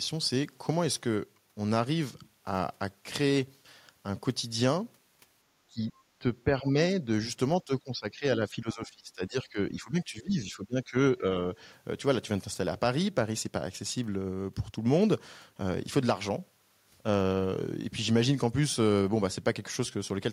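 It's a speech recording, and between 5.7 and 11.24 s the talker keeps getting pushed down: short dips at 5.7–5.93, 6.2–6.27, 6.44–6.76 and 7.05–7.09 s, one long stretch from 7.58 to 10.95 s, and a last blip at 11.24 s. The deepest cuts sink by around 15 dB, the others more gently. It sounds like speech suppressed in double talk, likely an echo canceller muting this side while the far end was also talking.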